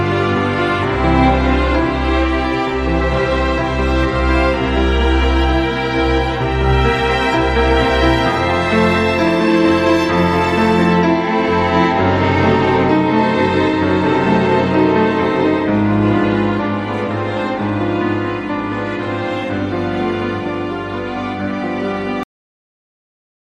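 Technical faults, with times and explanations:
22.23–23.59 s, cut-off end: sound halts mid-event into digital silence because the last buffers were never written; unlike a fade-out or natural ending, there is no decay.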